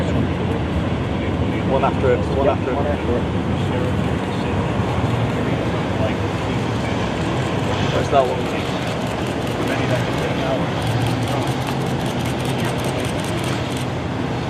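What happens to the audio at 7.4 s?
Nothing goes wrong at 7.4 s: the audio carries straight through that moment intact, with no dropout, click or other fault.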